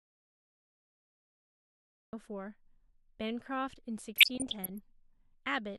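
The speech opens in an audio dropout to silence already under way, lasting until 2.13 s. The gap is silent with no room tone, unlike a quiet pause or noise gate, and speech resumes abruptly mid-flow. The likely cause is a lost input while recording continued.

From 4.16 to 4.78 s comes DAB burbling: bit errors, at a fraction of a percent, slipped past error correction and corrupted the MP2 data across what sounds like a couple of dozen frames. Wrong samples put short blips of noise into single sub-bands over the speech rather than the steady swirl of low-bitrate coding.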